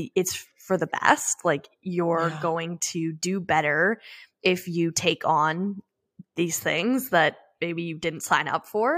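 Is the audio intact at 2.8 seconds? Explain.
Yes, at 2.8 s the speech plays through cleanly, with no dropout, click, distortion or other audible fault at that moment.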